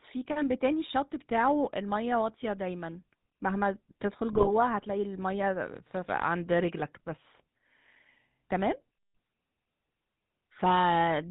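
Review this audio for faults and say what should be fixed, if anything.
The whole recording carries the GSM full-rate codec sound: speech cut off above 4 kHz, with a buzzy, gravelly roughness from the pulse-train excitation. That roughness sets it apart from a plain low-pass filter, and it fits a 13 kbps full-rate stream. Using a wideband codec would prevent it.

From 4.32 to 4.49 s, GSM bit errors break the speech into squawks and pops. Corrupted filter, pitch and gain values warp the spectrum and the level frame by frame, across what sounds like about eight frames. Dropped packets would leave gaps or muting instead of these bursts. Better radio coverage or stronger channel coding would prevent it.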